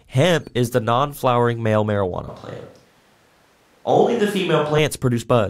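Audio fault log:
2.29–4.78 s, switch to a distant microphone: speech abruptly turns roomy, hollow and bass-light at a similar level, likely a far mic standing in for the close one.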